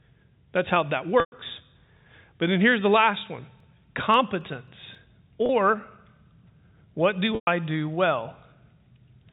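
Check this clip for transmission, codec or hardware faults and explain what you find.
Two faults are present: packet loss with pitch repetition, and CD scratch ticks.

Packet loss with pitch repetition occurs three times: 1.20 to 1.32 s, 5.46 to 5.49 s, and 7.35 to 7.47 s. Packets went missing. The receiver repeated the last pitch period and faded it out. The 30 ms gap sounds like a briefly held, buzzy tone. The two 120 ms gaps outlast the fade, drop to silence, then return through a short cross-fade.

CD scratch ticks run from 3.33 to 4.95 s: seven ticks, roughly four a second, of uneven strength. Each one marks a turn of the disc past a blemish that error correction couldn't rebuild. The player interpolated or muted the damaged samples, giving tiny dropouts of about 4 ms at most.

The G.711 A-law telephone coding keeps everything below 4 kHz.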